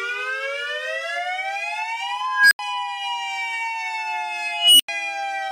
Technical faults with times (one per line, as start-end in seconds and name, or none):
2.27-2.59 unstable filter
4.53-4.88 unstable filter